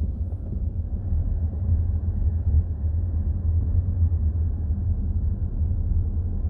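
No technical faults can be heard in this audio.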